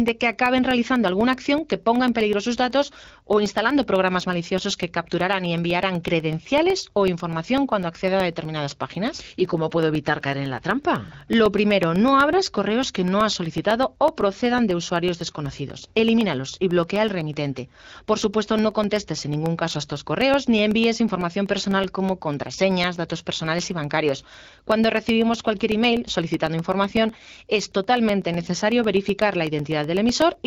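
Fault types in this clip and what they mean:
Periodic USB or driver dropouts: Something on the USB bus or in the audio driver is stalling the audio stream at a fixed rate. Each stall drops a very short stretch of sound, roughly a millisecond, and leaves silence in its place. The gaps repeat every 0.125 s, eight times a second, from about 0.08 s to 30.34 s. They are heard as a steady ticking under the speech, around two hundred ticks in all, and only while speech is sounding.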